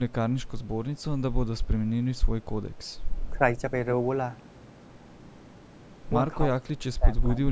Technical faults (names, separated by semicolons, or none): speech suppressed in double talk